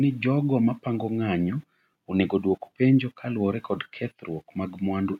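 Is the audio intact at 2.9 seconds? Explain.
Yes, the audio is intact at 2.9 seconds, with no fault to be heard at that moment.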